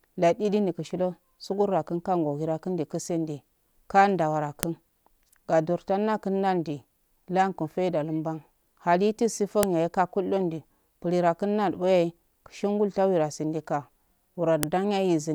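WAV pieces were joined every 5 s without stripping their headers, so header bytes play as file header played as audio: sharp snaps at 4.63, 9.63 and 14.63 s.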